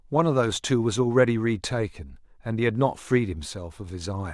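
No technical faults can be heard anywhere in the recording; the speech signal stays steady and intact throughout.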